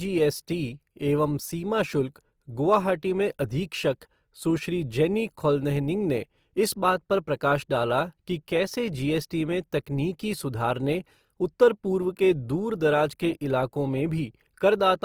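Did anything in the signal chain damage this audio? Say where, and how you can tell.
Yes, at the codec: the speech is grainy throughout, likely Opus compression in CELT mode near 24 kbps. Spectrogram bands look noise-filled and hole-free, reaching 20.2 kHz.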